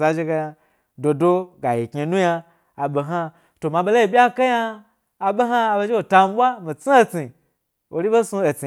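Nothing here catches the ear as a technical fault; the speech just runs along without any glitch, dropout or odd artefact worth pointing to.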